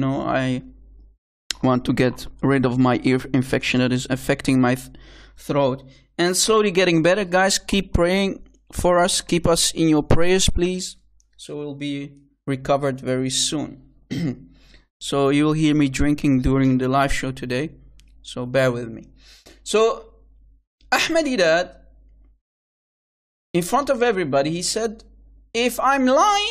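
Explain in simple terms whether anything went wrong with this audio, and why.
Nothing went wrong here.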